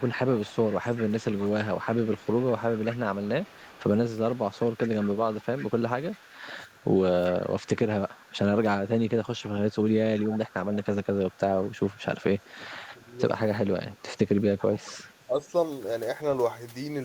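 From the start to 6.85 s there's a faint delayed copy of the speech trailing it by 389 ms, about 20 dB down. That's likely an echo leak, with the far end's echo canceller letting its loudspeaker pickup back through. It returns from 7.64 to 8.35 s, quieter at about 30 dB down, then from 9.05 to 13.07 s and from 14.58 to 15.14 s at the louder level.

Right at 13.07 s the speech dips by a few dB for about a tenth of a second, and again from 15.27 to 15.48 s for roughly a fifth of a second. That's likely speech suppressed in double talk, where the canceller couldn't tell the talker from the echo and pulled everything down.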